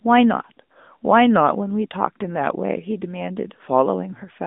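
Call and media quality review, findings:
AMR narrowband mobile codec, throughout: band roughly 200 Hz to 3.6 kHz, nothing above 3.7 kHz; plainly audible buzzy, synthetic speech, consistent with a mid-rate AMR-NB mode near 10 kbps.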